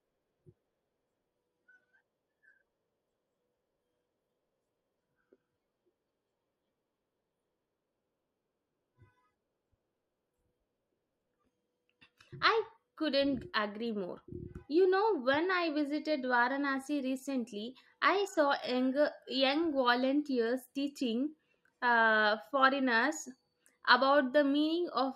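Across the whole recording of speech, no technical fault can be heard in the signal.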